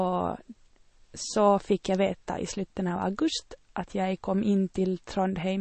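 Throughout, the speech stops dead above 8.3 kHz and has a watery, swirling texture. The cause is likely MP3 compression starved of bits, pointing to a rate near 32 kbps. The encoder cut the treble and let weak frequency lines flicker between frames.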